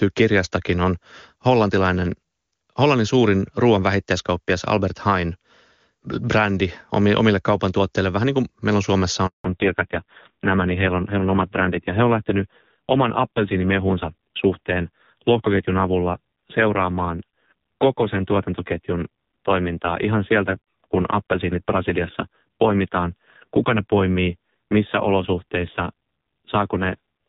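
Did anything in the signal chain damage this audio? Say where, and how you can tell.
Yes. Network stage: a handover gap at 9.26 s, 180 ms of silence as the call hopped networks, with the voice dying away within a few tens of milliseconds and the speech in between lost.

Codec stage: from 9.44 s onward there's a fallback to narrowband, from HD Voice at 23.85 kbit/s to AMR-NB at 5.9 kbit/s. Everything above 4 kHz is gone and the speech turns duller and rougher.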